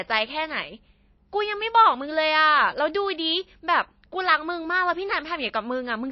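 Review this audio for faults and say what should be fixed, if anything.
The speech has a hard ceiling on its treble for the whole clip: nothing comes through above 5.8 kHz, and there's a clearly audible watery, swirly texture on top. That's likely MP3 compression run very lean. The encoder cut the top end at a fixed point and let weak frequency lines flicker in and out between frames, which fits a bitrate somewhere around 26 kbps. Re-export from the original source at a much higher bitrate, or use lossless, so the treble and detail survive.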